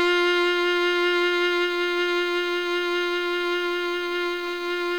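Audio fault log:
throughout, low bit depth without dither: grainy distortion that follows the sound, with quiet parts turning gritty or sputtering, likely from 7-bit truncation. Unlike steady hiss, the error rises and falls with the signal, roughly 30 dB down.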